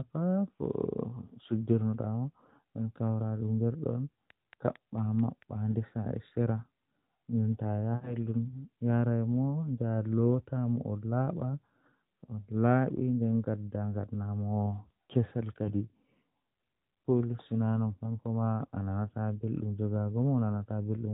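A train of clicks runs from 4.30 to 5.43 s: about seven evenly spaced pops, 4.5 per second, roughly as loud as the speech, likely interference from nearby equipment.

Lost AMR speech frames follow at 7.96 to 8.17 s. About 60 ms of speech, which fits three 20 ms frames, drags out and fades as the decoder repeats the last good settings with falling gain. This is heard through the narrowband mobile codec, which keeps nothing above 4 kHz.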